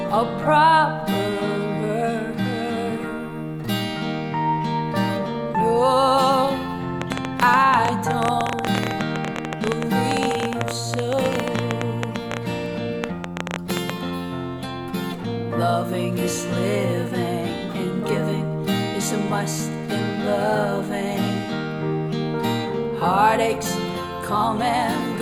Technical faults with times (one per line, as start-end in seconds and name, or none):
7.02-13.91 train of clicks